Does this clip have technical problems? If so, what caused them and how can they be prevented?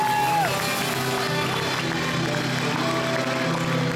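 No, nothing stood out on listening that would point to a technical problem in this clip.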